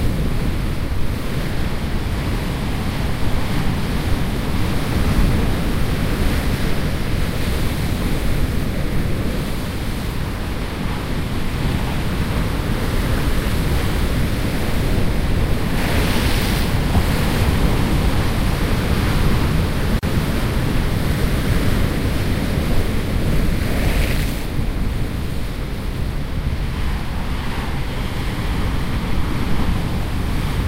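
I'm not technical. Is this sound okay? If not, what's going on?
No. At about 19.99 seconds the sound drops out and comes back at 20.03 seconds. That is a gap of about 37 milliseconds, so it feels like a tiny hiccup. The fault is a gap at a join of encoded pieces. The audio was compressed in separate chunks and then stuck together. Each chunk brought a bit of silent padding with it, and nobody trimmed it. After the gap, the sound picks up right where it stopped.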